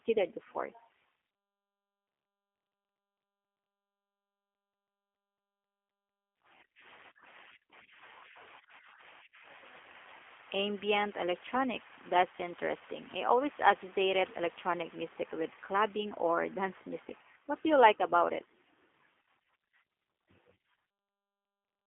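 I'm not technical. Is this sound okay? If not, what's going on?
No, not entirely. Throughout the recording, the speech has gone through the G.729 codec, a low-data phone-call format. It rebuilds the voice from a simplified model, so everything outside a narrow telephone band is gone, leaving it thin, slightly rough and clearly synthetic-sounding.

There is also sample clock jitter, a small, uneven wobble in the timing of the device that digitised the sound. It adds a very faint hiss or grain that tracks the louder, brighter parts of the speech and disappears when nobody is talking.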